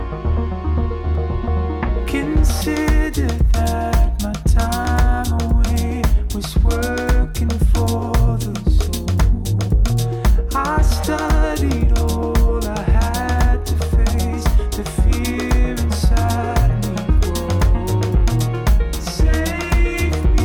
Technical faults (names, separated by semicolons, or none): clock drift buffer slips